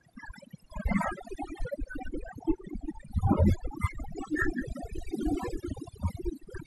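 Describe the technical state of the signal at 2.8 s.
At 2.8 s the background between syllables collapses to near silence scattered with twinkling specks, and the speech has its softer components hollowed out. That is overdone noise removal, present across the whole clip rather than just at this moment. A noise reduction stage was driven too hard, so any frequency band sitting close to its noise estimate gets pushed down or cut out entirely, dragging the quieter parts of the voice away with the noise.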